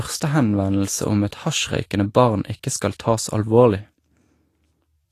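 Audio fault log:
Throughout, Vorbis compression: grainy, hissy treble, roughened speech and nothing above 14.2 kHz, likely from Vorbis coding at a low bitrate near 34 kbps.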